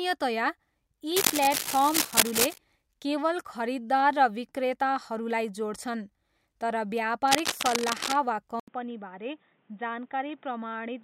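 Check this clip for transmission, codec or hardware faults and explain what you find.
Three hardware faults: two bursts of cable scratch noise and an input switched to a poorer device.

Cable scratch noise occurs from 1.16 to 2.58 s, at roughly the level of the speech, and again from 7.28 to 8.15 s, a little quieter at about 5 dB below it. The likely cause is a worn cable or connector being moved so that its contact resistance flickers. That injects dense, irregular crackle that rustles over the speech. On a spectrogram each burst shows as ragged broadband speckle, and the waveform has jagged spikes riding on the signal.

The input is switched to a poorer device at 8.60 s and stays that way to the end. An 80 ms gap of silence comes first. After it, nothing is left above 3.8 kHz, the level drops by about 5 dB, and a new noise floor sits roughly 35 dB under the speech. The likely cause is the system changing to a narrower-band microphone or a headset call profile, so the sound turns abruptly dull and boxy. 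A spectrogram shows a clean horizontal cutoff and a raised floor beginning after a thin vertical blank strip.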